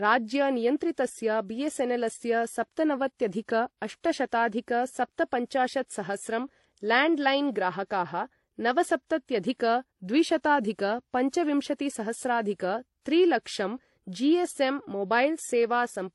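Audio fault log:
throughout: transcoding between lossy codecs. The speech was likely encoded and re-encoded in a chain ending in WMA, so each stage's artefacts pile onto the last. Nothing remains above 11.4 kHz, and the mixed artefacts of the early low-bitrate MP3 and HE-AAC passes are heard together.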